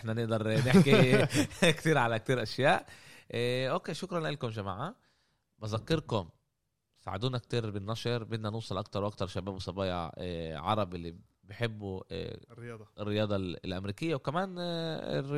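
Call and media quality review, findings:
Three sharp single clicks in the speech at 2.41 s, 12.62 s and 14.17 s. Each one is a single thin vertical line across the spectrum, with nothing missing to the ear. Likely dropped samples: a handful of samples skipped in the stream, well under a millisecond each, so the waveform jumps straight to a later value. Same signature all three times. Worth checking the capture or resampling path for occasional buffer slips.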